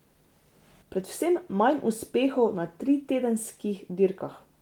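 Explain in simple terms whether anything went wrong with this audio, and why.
Nothing went wrong with this speech recording: the Opus voice compression it passed through did its job as intended and kept the full range of the sound rather than trimming it down.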